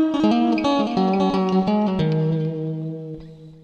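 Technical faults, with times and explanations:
0.0 to 1.68 s, doubled audio track: a second copy of the sound trails the first by around half a second, about 5 dB quieter, full-band and dry with no room tail. It's already running when the clip opens and drops out abruptly at 1.68 s, likely from a slower duplicate capture path or misaligned edit.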